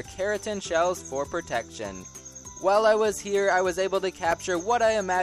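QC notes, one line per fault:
4.19–4.45 s, processor overload crackle: the processor missed a rapid run of very short buffer deadlines, each leaving a hard-edged silent gap, heard as gritty crackle.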